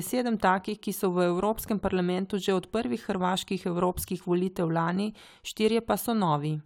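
Nothing is technically wrong with this speech recording; no faults occur at any point.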